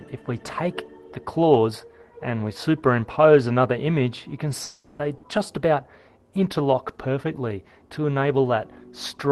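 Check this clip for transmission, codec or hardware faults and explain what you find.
Two transmission faults occur close together near the middle of the clip.

From 4.63 to 5.02 s there is a long network dropout, likely. The last sound is stretched into a fading buzz or hiss for about 360 ms, then the audio resumes with that stretch missing.

From 5.17 to 5.26 s there is a burst of packet loss. About 60 ms was lost or came too late to play. The receiver held the previous sound and faded it, leaving a brief smeared gap.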